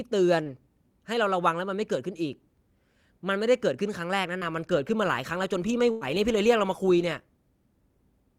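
A brief smear in the speech at 0.43 to 0.47 s, and again at 4.39 to 4.43 s, is short concealed packet loss. About 20 ms of audio arrived too late each time. The receiver bridged the hole by extending the preceding sound, then faded back into the real signal. At 5.91 to 6.03 s the speech stalls into a held, dwindling tail before jumping ahead. This is a burst of packet loss. Roughly 100 ms went missing, so the receiver stretched the last sound across the gap while fading it, and that stretch of speech is lost.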